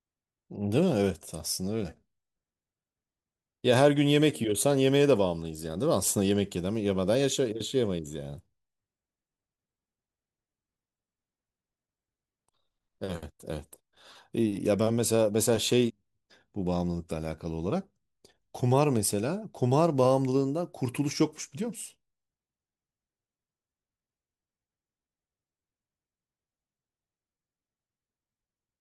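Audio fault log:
15.89 s, stream segment skipped: the speech jumps forward abruptly with a tiny blip, so a stretch of what was being said just isn't there. That's likely a chunk of the stream failing to load, with the player carrying on from the next one.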